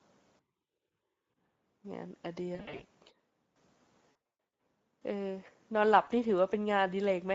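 This is speech carried over a Speex codec running at a modest setting, which fits a bitrate of around 16.8 kbps. At that rate the CELP coder has too few bits to describe the excitation properly, and the resulting Speex codec damage is plainly audible: the voice has a noisy, hoarse, slightly synthetic texture throughout. On top of this, VoIP packet loss concealed by the speech codec breaks up the signal three times. From 2.55 to 2.83 s, the sound points to roughly 180 ms of lost audio scattered over about 240 ms, with gaps up to 60 ms long. From 4.11 to 4.14 s, it suggests heavier loss, around 340 ms spread across roughly 480 ms, with runs up to 120 ms. At 6.03 to 6.09 s there is a short dropout of about 40 ms. In each gap, the decoder keeps extrapolating from its last pitch and filter state while lowering the gain, so the audio smears into a buzzy, fading tone or coloured noise. It also stays weak and distorted for a short while after the stream resumes.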